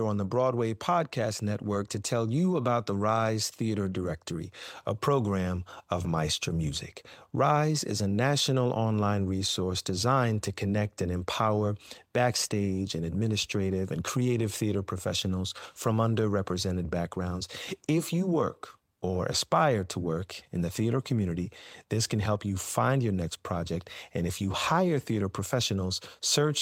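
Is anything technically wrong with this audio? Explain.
No, nothing technically wrong can be heard here.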